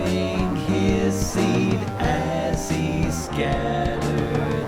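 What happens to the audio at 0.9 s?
At 0.9 s the computer activity noise is present, as it is across the whole clip. It is a faint buzzing, well below the sound, pulsing at around 150 times a second. Processor or graphics load is shifting the shared ground of the audio circuit.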